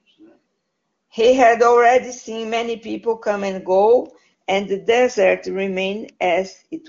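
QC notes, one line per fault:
Nothing stood out on listening to this clip.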